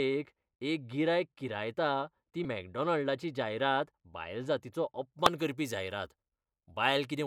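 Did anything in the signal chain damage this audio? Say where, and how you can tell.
Yes, two kinds of damage. From the start to 5.13 s the speech is dull and muffled, with a smooth downward slope in the treble reaching about 14 dB of loss at 10 kHz relative to 1 kHz. This is de-emphasis applied wrongly, a processing-stage error. A treble-cut filter meant to reverse pre-emphasis was run on audio that either had none or had already been corrected. After 5.13 s the top end opens up again, which confirms a filter switched into the chain rather than a property of the recording.

The second fault is damaged data in a compressed stream, at the codec or storage stage. It shows up as short glitches: one from 2.42 to 2.45 s, about 36 ms long, and a brief one at 5.26 s. Corrupted bytes in the compressed frames caused the decoder to misread them and lose sync until it locked onto a valid frame header. 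A clean encode would not produce these sharp, isolated artefacts.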